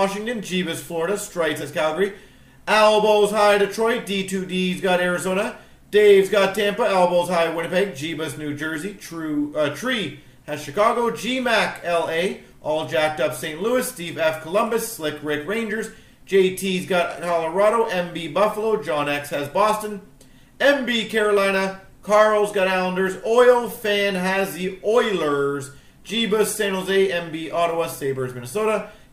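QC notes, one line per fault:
No faults found in this clip. Nothing on listening calls for a note.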